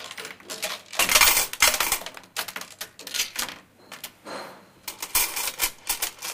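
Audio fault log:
No faults detected in this recording of sounds.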